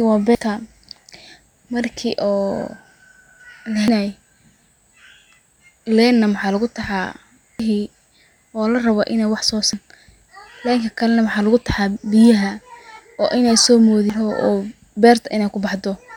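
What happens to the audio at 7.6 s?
At 7.60 s there is damaged data in the compressed stream. The decoder misreads the corrupted frame and must resync, producing a brief garbled blip.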